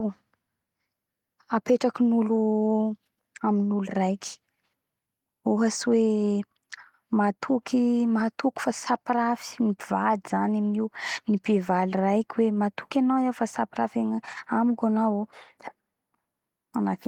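Speech recording with no technical faults to report.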